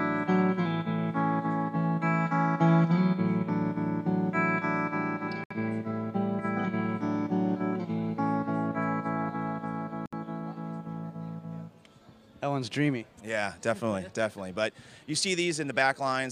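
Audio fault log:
5.44–5.51 s and 10.06–10.13 s, gap at a join of encoded pieces: both times the sound halts and returns after a gap of about 66 ms, then resumes exactly where it stopped. These are seams where separately encoded pieces were joined without trimming, leaving one run's padded last frame and the next run's start-up delay. Unlike a dropout, nothing is lost: the content picks up where it left off, and the codec smears the edges of each gap.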